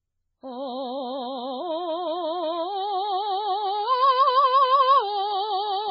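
From start to finish, the music has no content above 5.2 kHz. The top end simply stops there. Cymbal and other bright sounds turn watery and swirl. Quiet detail flickers in and out. Attacks blur. The cause is likely heavy MP3 compression. The encoder was short of bits, so it cut the treble at a fixed point and dropped weak frequency lines frame by frame. The damage fits a very low bitrate, around 16 kbps.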